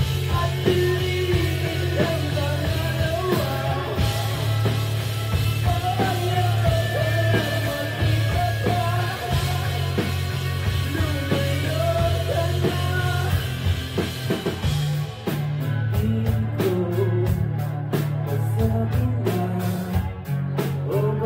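No technical faults can be heard anywhere in this recording.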